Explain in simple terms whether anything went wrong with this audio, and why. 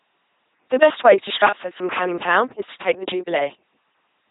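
The speech sounds like a buzzing robot from start to finish, the mark of an LPC-10 vocoder. Unlike ordinary muffled low-quality audio, each moment is rebuilt as either pure buzz or pure hiss.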